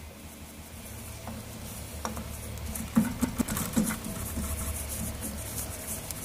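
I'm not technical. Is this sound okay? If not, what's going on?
No. The audio stutters three times: a short piece of sound plays again with an abrupt join, twice over from 0.34 to 0.68 s, then once each from 3.24 to 3.41 s and from 4.61 to 4.78 s. This is a repeated buffer. Fresh audio arrived late, so the player replayed the chunk it already held, about 0.17 s long, which fits an 8192-sample buffer. About 0.3 s of audio goes missing at the first stutter, and about 0.15 s at each of the others.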